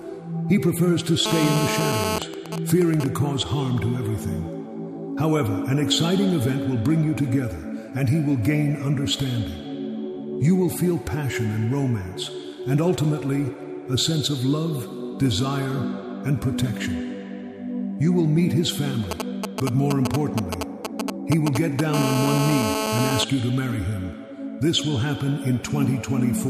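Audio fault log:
1.26–2.19 s, GSM phone buzz: a hard, raspy buzz at 217 Hz, thick with harmonics and unrelated to the sound beneath it, sitting about 2 dB below the signal. A nearby 2G phone in a call transmits in bursts 217 times a second, and the audio circuit rectifies those radio pulses into this steady tone.
2.22–3.06 s, GSM signalling bursts: the buzz breaks into even ticks with a longer 217 Hz buzz twice a second, a little quieter than the signal. The phone is still in the call, but its user has gone silent, so it sends only short groups of bursts, which the circuit rectifies.
19.11–21.95 s, GSM signalling bursts: a galloping dit-dit-dit of short buzzes sets in, roughly as loud as the signal itself. Here the phone is only signalling, sending brief groups of 217 Hz bursts, which are picked up and rectified by the audio circuit.
21.95–23.24 s, GSM phone buzz: the bursts give way without a gap to the continuous raspy 217 Hz buzz, about 2 dB below the signal. 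The phone has gone into a call and transmits in bursts 217 times a second, and each rectified burst adds to the steady, harmonic-rich tone.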